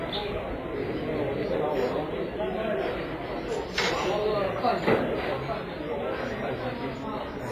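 An everyday-sounds recording, and the whole thing is smeared by heavy codec damage, likely WMA compression at a low rate, which fits something around 24 kbps. The transform blocks are long, so quantisation noise spreads tens of milliseconds around each event, giving a ringing, washy edge and a hiss that swells and fades with the signal. Quieter detail has been zeroed out, and there's nothing above 15.5 kHz.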